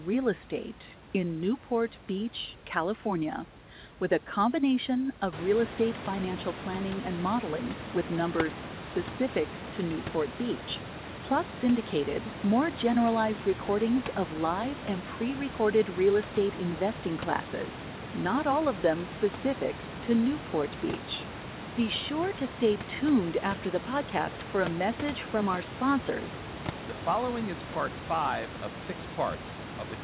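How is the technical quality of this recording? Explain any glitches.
Nothing stood out as a technical glitch when listening to this recording.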